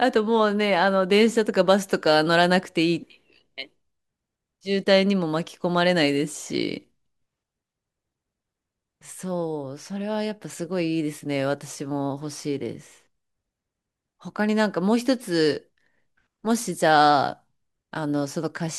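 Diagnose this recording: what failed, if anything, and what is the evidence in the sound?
Nothing failed here as far as I can hear, and there's nothing anywhere in the speech that points to trouble at any stage of the chain.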